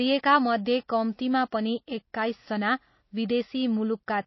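Heavy MP3 compression, likely at a starved bitrate (the damage fits something near 24 kbps), runs through the whole speech clip. With too few bits to go around, the encoder has cut the treble outright, leaving nothing above 5.8 kHz, and has dropped weak frequency lines that flicker in and out between frames. The result is plainly audible: a dull, band-limited sound with a watery, swirling texture, metallic chirping on s sounds, and smeared consonant attacks.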